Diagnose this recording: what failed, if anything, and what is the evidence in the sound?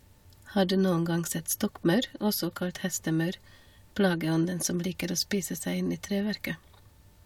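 Nothing in the speech points to a failure anywhere along the chain, so there's no stage to blame and nothing to diagnose.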